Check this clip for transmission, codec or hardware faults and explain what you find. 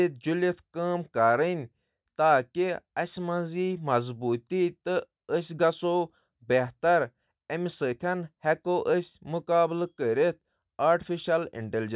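No faults can be heard anywhere in this recording.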